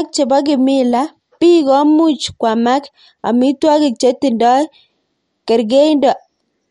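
Throughout the speech, there is plainly audible watery, swirling damage, with nothing above 11.2 kHz. This is likely MP3 compression at a low bitrate, around 49 kbps. Short of bits, the encoder drops weak frequency lines that flicker between frames and cuts the treble outright.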